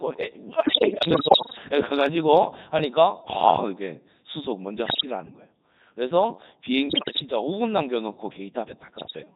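From the very start this speech is running through the Codec 2 vocoder, and heavily so. It sounds like the codec's top rate, around 3.2 kbit/s. Nothing of the original waveform survives. The decoder rebuilds the voice from pitch, voicing, energy and a rough spectral envelope, so everything comes out buzzy and robotic, with that hollow synthetic sheen across the whole clip.

Then there are bit errors on digital voice radio, first from 0.58 to 1.64 s. The error rate there is modest, maybe a few percent, but because each bit in a low-rate vocoder frame steers pitch, level or spectral shape, the voice wobbles and warbles through that stretch. The later bursts are nastier, closer to 10 to 15 percent: 4.86 to 5.05 s, 6.90 to 7.22 s and 8.96 to 9.19 s. In those the pitch and loudness lurch around and the sound dissolves into bleeps and robotic gibberish.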